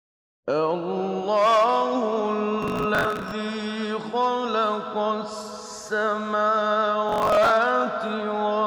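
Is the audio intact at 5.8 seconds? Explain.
Yes, at 5.8 seconds the audio plays through cleanly, with no dropout, click, distortion or other fault at that moment.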